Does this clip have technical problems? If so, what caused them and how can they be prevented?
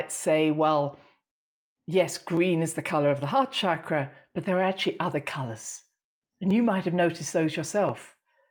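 Yes, there are clock drift buffer slips: a regular click about every 1.38 s, from just after "say well" at 0.99 s through 7.89 s. Likely two devices on separate clocks, with the pacing pointing to roughly a 500 ppm mismatch, dropping or repeating a few dozen samples each time. To prevent it, lock both devices to one shared clock or use asynchronous sample-rate conversion between them.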